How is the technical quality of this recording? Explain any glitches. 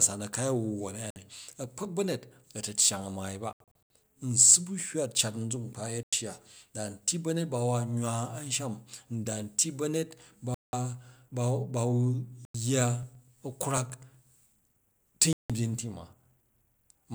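The recording has two recurring faults that break up the speech.

Six short silences occur at 1.10, 3.53, 6.03, 10.54, 12.45 and 15.33 s, lasting 56 to 224 ms. At 3.53 s the gaps are scattered over about 370 ms. These are likely Bluetooth dropout, where late wireless packets are discarded. Each shows as a sharp-edged blank column on a spectrogram, a flat waveform line, and the speech resumes further along.

From 13.03 to 15.14 s, periodic USB or driver dropouts skip roughly a millisecond of audio every 0.124 s, about twenty times in all, as a blocked driver loses samples. They sound like a steady ticking under the speech and show as evenly spaced thin vertical clicks on a spectrogram.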